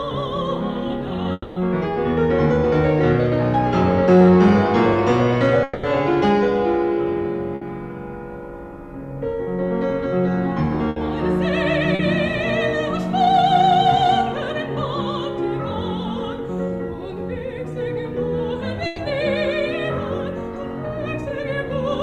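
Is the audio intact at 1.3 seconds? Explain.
No. From 1.32 to 1.57 s the sound breaks off and is replaced by a synthetic buzzy continuation of the last moment, which fades over about 240 ms and ends in a brief silence of about 10 ms before the audio resumes. The likely cause is a long network dropout: roughly a quarter-second of audio never arrived, the receiver stretched what it last had to cover the hole, and playback then picks up later with that portion lost.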